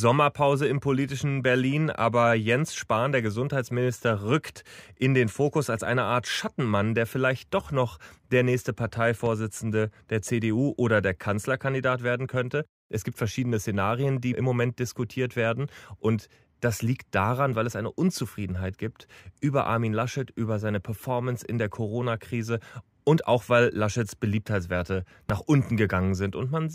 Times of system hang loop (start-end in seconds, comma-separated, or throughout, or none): none